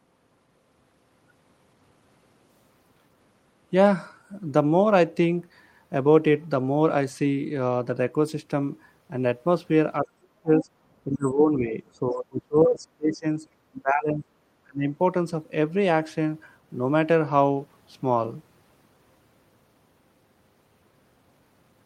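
From 10.02 to 10.68 s the speech is suppressed in double talk. Its level sinks by roughly 35 dB. Both sides were likely talking at once, and the echo canceller turned everything down. The same ducking returns at 11.05–11.76, 11.94–13.26, 13.74–14.25 and 14.63–14.86 s, with dips of about 15 to 30 dB.

At 10.55–10.64 s the other side's voice leaks through. A brief scrap sits about 15 dB below the speech. The echo canceller likely failed to strip the loudspeaker signal from the microphone.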